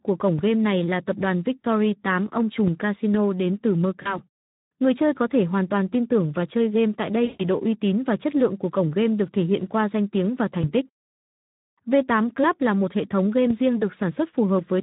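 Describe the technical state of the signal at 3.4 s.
At 3.4 s the speech carries Speex codec damage, which runs through the whole clip rather than just this moment. Speex is a CELP coder. It models the vocal tract and spends its bits on the excitation signal that drives it. Here the excitation is coarsely coded, which fits a low setting of around 11 kbps. The damage is plainly audible. The speech sounds noisy and hoarse, with a rough texture over the voice.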